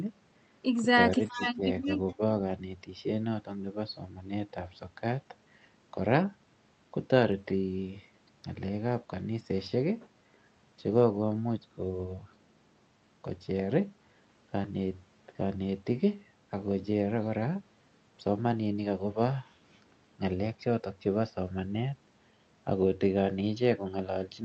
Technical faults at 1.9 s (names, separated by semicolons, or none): speech suppressed in double talk; echo leak